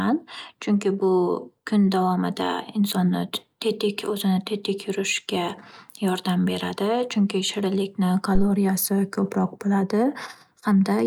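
At 8.35 s a phantom power thump cuts into the speech and lasts until about 8.46 s. A supply voltage was switched on or off on a live microphone input, and that sudden DC step passed through the coupling capacitors as a low-frequency transient. It is heard as a deep, dull thump peaking at about -10 dBFS, with a fast 25 ms decay that leaves it short and punchy rather than boomy.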